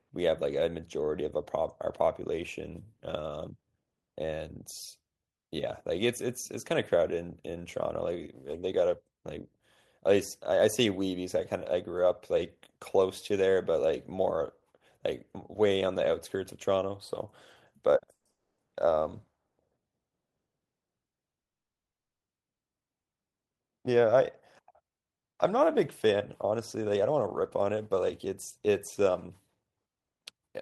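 Packets most likely stalled in transit and the jitter buffer ran dry, producing a call audio freeze at 18.12–18.26 s, 18.31–18.59 s and 19.47–19.59 s. In each, the last sound is stretched into a short fading buzz, dropping to silence for about 20–40 ms before the speech resumes exactly where it left off. The stalls at 21.40–22.26 s and 22.49–22.62 s are heard as plain silence. Nothing is lost, but each pause adds its full length to the delay, up to 0.85 s.

Once the held-up audio arrived, the buffer was overfull, and the receiver trimmed pitch-period-sized slices to catch up. This jitter buffer speed-up runs at about 111% from 23.69 to 24.20 s, cutting roughly 70 ms. It then runs at 108% from 24.61 s to 30.60 s, cutting around half a second. The speech keeps its normal pitch but sounds noticeably hurried throughout these stretches.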